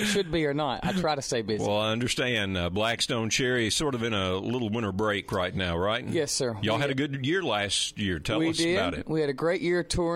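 No technical faults can be heard anywhere in the audio.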